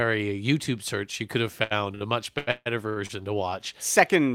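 A speech recording with two short stalls from late packets, at 1.63 to 1.73 s and 1.95 to 2.03 s. At each point a packet arrived after it was due, the jitter buffer emptied, and the receiver held the last sound for about 73 ms and then 59 ms before resuming exactly where it left off. The result is a brief smeared sustain, with a slight buzz or dip, rather than a hole. Unlike a packet-loss dropout, nothing is skipped, and the speech that follows is simply pushed later by the same amount. From 2.38 to 3.11 s the problem becomes repeated stalls (stutter). Packets kept arriving late, so the buffer ran dry four times in quick succession. The receiver stretched the last sound to fill each wait, fading it in the longer ones, the longest lasting 147 ms, and nearly half of that stretch is held sound rather than fresh audio. What sets this apart from the isolated stalls is the rhythm: a dragging, stop-start delivery across most of a second instead of one held moment. 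As with those stalls, no audio is actually lost.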